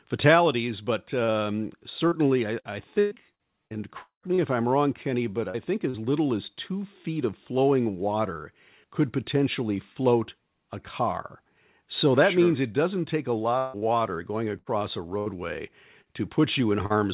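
Speech over a call line, and it falls apart in two stretches with repeated packet loss that gives it a robotic sound. From 1.24 to 4.41 s a run of dropouts chops the sound, with about 0.56 s missing in total and the longest hole near 0.2 s. Each gap gets papered over by stretching the last bit of audio, so you hear a choppy stutter with chunks gone. The same thing returns from 13.58 to 16.93 s, with about 0.44 s lost and the worst gap around 0.16 s. Between those, there's short concealed packet loss at 5.50 s and again at 5.90 s, each about 40 ms. These are tiny holes the receiver patched by extending the preceding sound, and they come across as a quick smear or wobble where a short sound can get swallowed. Underneath it all, the call path itself tops out at 4 kHz, which fits G.711 mu-law at 64 kbps.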